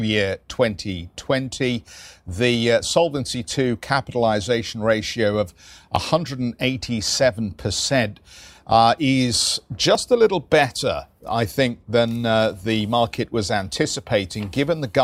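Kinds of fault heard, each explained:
Audio missing between chunks: the audio was likely handled in 4-second blocks, and a few milliseconds were lost at each handover, with the edges joined directly. This gives tiny skips at 5.96, 9.95 and 13.95 s, right after "capitalization ratio of", "uh is" and "uh the market was".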